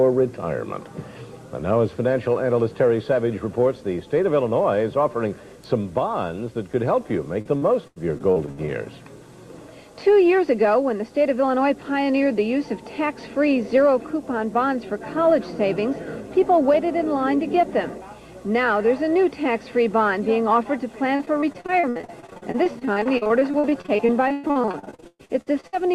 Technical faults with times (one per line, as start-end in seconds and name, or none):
7.41-8.70 repeated packet loss (robotic sound)
21.16-25.75 repeated packet loss (robotic sound)